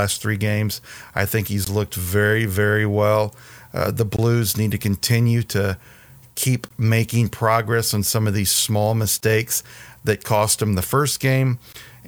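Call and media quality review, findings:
Gap between chunks in the speech: five short dropouts of 20 ms each, at 1.65, 4.17, 6.69, 9.21 and 11.73 s, one every 2.52 s. The first sits between "three games I think" and "looked very very well", and the third between "to continue to keep" and "making progress on some". Probably the streaming or playback layer. Audio arrives in blocks of 2.5 s and each one starts late, leaving brief silent holes at the joins, with nothing missing.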